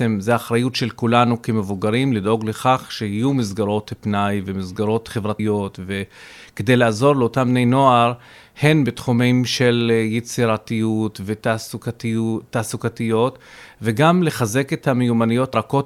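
At 5.39 s and again at 15.54 s the speech lurches forward, losing about a tenth of a second. These are compressed frames skipped: whole blocks of coded audio never reached playback, and the jump fits about three frames of 32 ms each.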